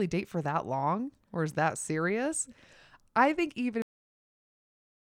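The last buffers were never written, so at 3.82 s, after "I think even", a cut-off end stops the speech mid-sound into instant digital silence.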